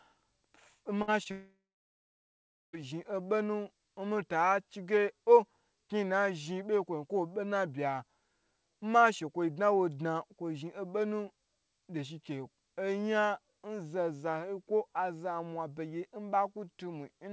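Speech carried over a call path whose coding removes everything above 8 kHz, which fits a G.722 codec at 64 kbps. A burst of packet loss hits at 1.02–1.10 s. About 56 ms is filled by the receiver stretching the last sound into a fading buzz or hiss. Around 60 ms of real audio is skipped when the sound resumes. A short concealed packet loss follows at 1.24–1.27 s. Roughly 20 ms never arrived in time. The decoder bridges about 17 ms with continued sound, heard as a brief smear or wobble. From 1.31 s to 2.75 s comes a long gap. At first the last sound is carried on and fades. Then about 1.15 s of near silence remains. The audio returns at 2.75 s with that stretch missing, likely a long network dropout.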